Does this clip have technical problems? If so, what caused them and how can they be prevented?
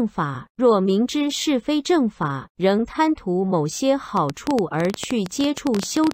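Yes. From 4.17 to 6.12 s, a train of clicks ticks over the speech, uneven at about 11.8 per second and peaking around 15 dB above it. The likely cause is nearby interference or a faulty connection or power supply. They show as narrow waveform spikes and thin vertical spectrogram stripes. Keep equipment away from cables and use a stable interface.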